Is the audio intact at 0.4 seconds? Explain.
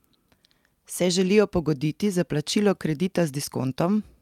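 Yes, the speech at 0.4 seconds plays through cleanly, with no dropout, click, distortion or other fault at that moment.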